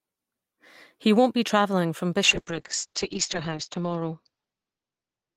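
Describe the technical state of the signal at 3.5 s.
At 3.5 s the speech sits inside a call bitrate drop that begins at 2.24 s and runs to the end of the clip. The encoder falls from 48 to 6 kbps. Coarser coding and an 8 kHz bandwidth limit make the speech rough, watery and muffled.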